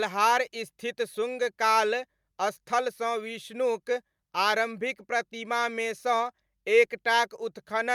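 No technical faults can be heard anywhere in this speech recording.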